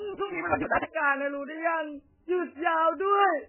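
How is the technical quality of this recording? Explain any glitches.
Poor quality, with heavy codec damage throughout and a sped-up, buzzing opening.

Across the whole recording the speech sounds dull, watery and swirly, with nothing above about 3 kHz, so sibilants lose their edge and attacks smear. The likely cause is MP3 compression at a very low bitrate, around 8 kbps, where the encoder cuts the treble and weak frequency lines flicker on and off between frames.

From 0.00 to 0.85 s the speech runs about 1.88 times too fast at roughly its normal pitch, under a steady 172 Hz buzz. This is a block size mismatch (truncated): one stage writes longer blocks than the next reads, which fits a 256-sample read, and each block's tail is dropped.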